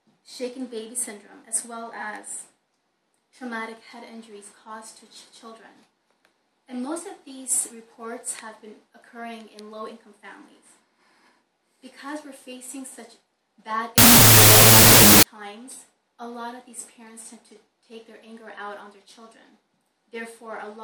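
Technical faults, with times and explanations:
13.98–15.23 s, wrong sample width: a burst of loud, harsh noise with the original sound faintly buried inside, at half speed, an octave low. This fits 32-bit float data read as 16-bit integers, splitting each sample into two mismatched values.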